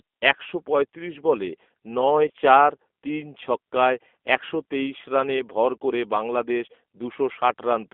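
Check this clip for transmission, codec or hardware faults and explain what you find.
Two faults are audible: plainly audible G.729 codec damage throughout, and one concealed packet loss.

G.729 codec damage runs the whole clip. Speech sounds rough and synthetic, confined to about 250 Hz to 3.5 kHz, which fits an 8 kbit/s pulse-based codec.

VoIP packet loss, concealed by the speech codec, occurs at 2.28 to 2.31 s. About 20 ms went missing, which fits one lost packet. The decoder stretched the previous sound into a brief buzzy or noisy patch that fades.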